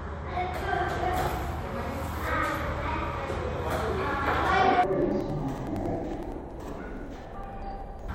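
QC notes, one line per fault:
4.84–8.15 s, interleaved audio read as planar: the sound drops an octave, doubles, and turns choppy through to the end. Alternating left/right samples in each roughly 93 ms block, which fits a 4096-sample block, are split into first-half left and second-half right, so each half plays at half speed in parallel. On a spectrogram, all content shifts down to half frequency with vertical seams at about 10.8 Hz. The waveform shows abrupt steps at each block edge.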